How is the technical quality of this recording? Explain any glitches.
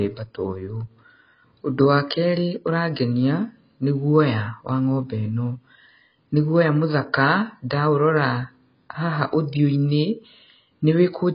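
The technical quality is poor. Heavy AAC compression damage runs through the whole recording. All audio above about 5.4 kHz is missing, so the speech sounds dull and muffled. Sibilants turn fizzy and smeared, and sustained sounds take on a watery warble. The likely cause is AAC-LC coding at a very low bitrate, around 16 kbps. At that rate, the encoder cuts the top band completely. It also quantises the remaining frequencies so coarsely that gaps and substitute noise appear.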